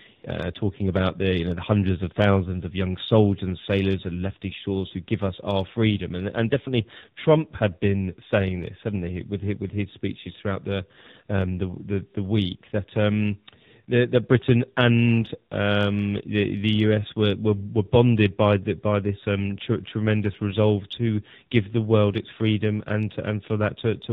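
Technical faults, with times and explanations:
Throughout: AMR narrowband mobile codec, at a rate that fits 7.4 kbps. The speech is band-limited to 4 kHz, so it sounds muffled and thin. At so few bits the vocal-tract model and sparse pulse excitation give the voice a plainly audible buzzy, synthetic edge.
0.16–0.24 s: AMR comfort noise. For 80 ms the phone treated the input as silence and sent no speech frames. The receiver filled the gap with smooth synthetic noise built from a coarse level and spectrum estimate, so the real background briefly switches to a steadier hiss.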